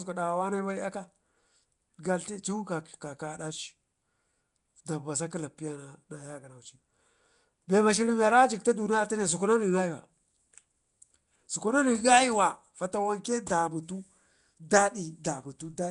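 Throughout, the speech carries a rough, hissy halo and smeared, underwater texture with nothing above 10.6 kHz, likely Nellymoser compression filling starved bands with noise at a bitrate near 44 kbps.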